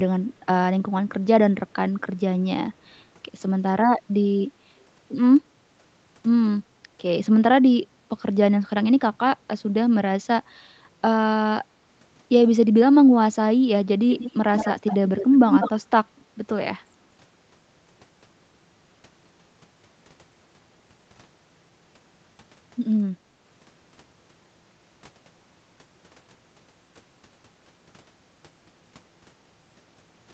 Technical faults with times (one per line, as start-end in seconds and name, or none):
4.43-4.55 background gated by the echo canceller
11.83-11.94 background gated by the echo canceller
14.10-15.82 echo leak